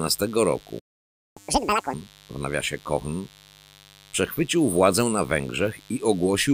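A mains buzz runs under the whole speech clip, a steady raspy tone built on 50 Hz with harmonics reaching into the kilohertz range. It sits roughly 30 dB below the speech, the kind of interference that switching spikes from a dimmer, rectifier or unshielded line inject twice per mains cycle.

At 0.79 s a playback stall cuts the speech off mid-flow and leaves silence until 1.37 s, a gap of about 0.57 s. The player most likely ran short of data or had its output thread blocked, and the sound resumes where it broke off.

From 1.37 to 1.94 s comes catch-up at higher speed. The backlog is resampled and played at 2.0x, so the speech runs fast and jumps up by around ten semitones, sounding chipmunk-like, before returning to normal speed and pitch once the lost time is recovered.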